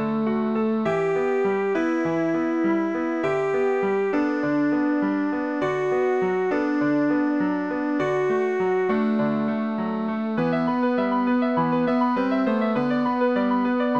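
No faults can be heard anywhere in the audio.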